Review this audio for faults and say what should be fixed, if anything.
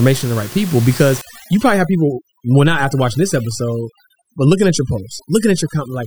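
From 1.21 s to the end, the background drops to near silence dotted with twinkling specks, and the speech has its quieter parts hollowed out. This is overdone noise removal: a reduction stage set too aggressively pulls individual frequency bands far down whenever they sit close to its noise estimate, and the softer speech components are caught with the room noise, which sits about 16 dB below the speech. Lower the reduction strength or add a floor so bands are attenuated rather than gated off.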